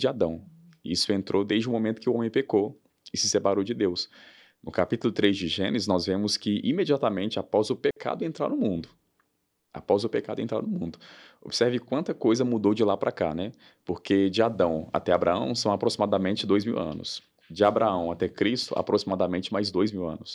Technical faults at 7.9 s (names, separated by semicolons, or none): digital wireless dropout